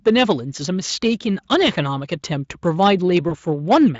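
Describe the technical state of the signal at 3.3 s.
At 3.3 s there is VoIP packet loss concealed by the speech codec, from about 3.29 to 3.35 s. The gap points to a single lost 20 ms packet. The Speex decoder rebuilds it from the preceding pitch and filter, so the speech briefly turns buzzy or noisy and weak before recovering.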